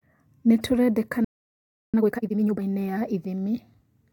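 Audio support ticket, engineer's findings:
Playback stall, 1.24–1.94 s: likely buffer underrun or blocked output thread in the player. Speech cuts out mid-flow for about 0.69 s, then resumes where it stopped.

Time-compressed catch-up, 1.94–2.62 s: player drains its backlog by splicing and cross-fading short segments at 2x speed. Speech sounds hurried, pitch unchanged.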